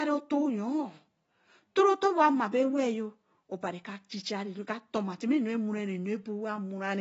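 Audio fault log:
Throughout, AAC compression: nothing above 7.7 kHz, and the speech sounds dull and smeared, warbling on sustained sounds and fizzy on sibilants, likely from AAC-LC coding at a rate fitting about 24 kbps. A plain low-pass filter would leave the remaining band clean.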